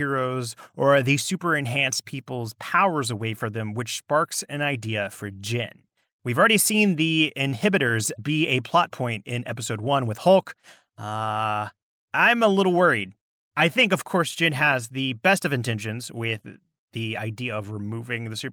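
No technical faults can be heard anywhere in the speech recording, and the signal stays intact and continuous throughout.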